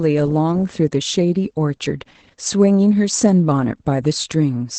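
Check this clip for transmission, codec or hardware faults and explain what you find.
The clip carries one fault, present for its whole length: Opus voice compression. The speech is coded by Opus in its SILK linear-prediction mode at wideband, and there is nothing above about 8.6 kHz. The damage is plainly audible, with a muffled, hoarse, slightly robotic quality. That comes from the band limit and from coarse coding of the excitation signal, which fits a low bitrate of around 12 kbps in 20 ms frames.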